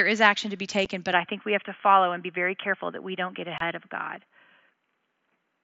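At 0.85 s a 7.5 ms hole opens in the speech with abrupt edges. This is unconcealed Bluetooth headset packet loss: a voice packet from headset to phone never arrived, and nothing filled the gap.

From 1.13 s to the end the sound turns dull and boxy, with nothing above 3.4 kHz. The level shifts by around 5 dB, a faint new noise sits far below the speech, and there is no gap at the change. The likely cause is the input switched to a poorer device, a narrower-band microphone or headset call path.

From 3.58 to 3.61 s a longer 22.5 ms hole cuts in with abrupt edges. This is the same packet loss again, fitting three missing 7.5 ms packets on the mSBC link.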